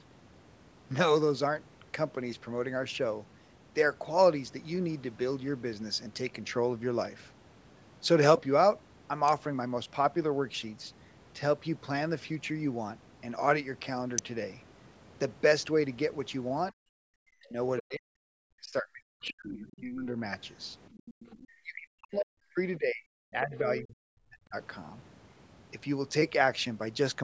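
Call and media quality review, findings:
Electrical switching spike, 9.28 s and 14.18 s. Likely a nearby switch, relay or static discharge arcing and coupling into the audio line. Each is a sharp transient of a few milliseconds, laid over the speech rather than replacing it. Broadband, no lingering tail; the surrounding signal continues straight through.

Speech suppressed in double talk, 16.71–16.75 s: echo canceller likely unable to tell near-end talker from loudspeaker echo while both sides spoke, so it ducked everything. Brief dip of about 20 dB, roughly 40 ms. Same failure 17.23–20.17 s and 21.63–24.56 s: heavy attenuation, deepest about 40 dB, around two seconds of each span affected, speech gapping and thinning in pieces.

Other side's voice leaking through, 19.27–19.31 s, 19.71–19.80 s, 20.97–21.47 s. Likely the echo canceller leaving residual far-end loudspeaker pickup in the mic path. 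Faint second voice, about 25 dB below the talker (about 30 dB at 19.71 s), landing in and just after the suppressed stretch.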